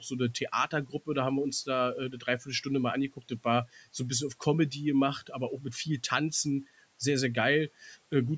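At 0.71 to 1.08 s, 2.11 to 2.48 s and 3.16 to 3.45 s, the noise suppressor cuts into the speech. It mistakes brief parts of the speech for the room noise beneath it. It pulls them down with the background. The deepest drops are about 11 dB, then about 10 dB twice. Each cut lasts roughly a tenth of a second. Those moments sound swallowed and faint, as if the sound briefly dips away.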